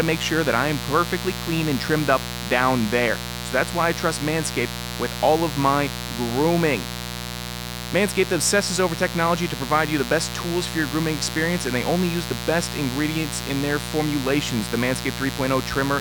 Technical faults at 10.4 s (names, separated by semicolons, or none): mains buzz